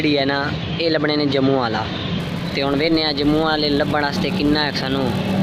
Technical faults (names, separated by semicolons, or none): filter restarted on every block